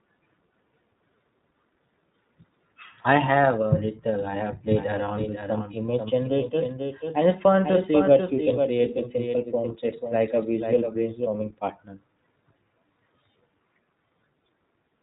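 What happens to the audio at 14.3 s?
At 14.3 s the speech is still passing through the iLBC codec, as it does throughout the clip. Each short frame, consistent with 20 ms frames at around 15.2 kbps, is coded independently, and nothing above 3.8 kHz survives, so the voice sounds muffled, rough and plainly synthetic.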